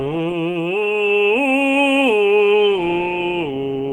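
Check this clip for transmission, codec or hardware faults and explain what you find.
No transmission, codec or hardware faults.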